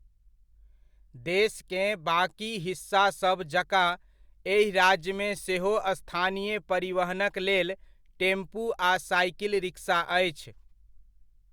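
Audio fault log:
The speech signal carries no audible technical faults anywhere in the recording.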